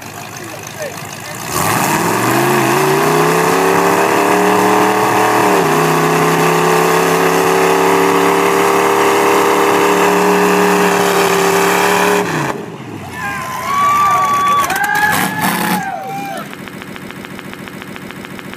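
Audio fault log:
16.66 s to the end: broken-record loop. A 143 ms snippet repeats exactly, back to back, 13 times, likely a stalled stream resending its last fragment.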